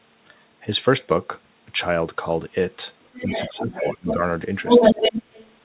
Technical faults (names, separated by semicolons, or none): other side's voice leaking through; speech suppressed in double talk